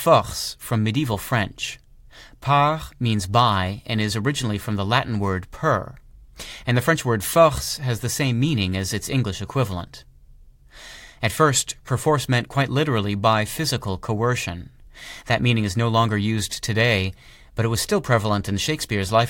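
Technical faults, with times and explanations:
0.2 to 19.21 s, clock slip clicks: faint, evenly spaced ticks through the speech, roughly every 0.15 s, around 150 in all. Likely two unsynchronised clocks about 200 ppm apart, so one sample gets dropped or repeated each time the drift adds up to a whole sample.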